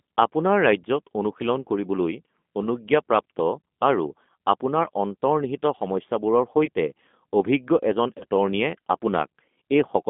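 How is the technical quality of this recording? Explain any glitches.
The technical quality is limited: the speech is intelligible but coarse throughout, with two brief dropouts. Throughout, a rough, slightly synthetic, narrow-band tone from the G.729 codec at 8 kbit/s passing only about 200 Hz to 3.5 kHz, because speech is rebuilt from a filter, a pitch predictor and sparse pulses. At 6.65–6.69 s and 8.18–8.23 s, brief, fading smears from VoIP packet loss concealed by the speech codec. Each covers about 30 ms of lost audio, consistent with a single lost packet, which the decoder filled by extrapolating its last pitch and filter at falling gain.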